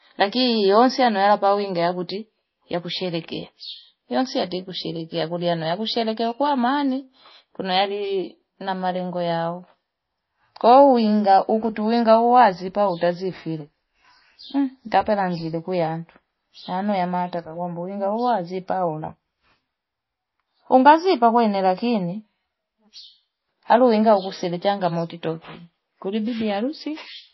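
Throughout the recording, the speech was likely first squeezed through a very low-bitrate MP3 encoder and then saved again as MP3 at a high bitrate. That is the fault of low-bitrate audio saved at a high bitrate. The roomy second pass cannot rebuild what the first pass threw away. Nothing sounds above about 5.8 kHz, leaving the speech dull and muffled, with the smeared, watery coding artefacts of an encoding near 24 kbit/s still audible.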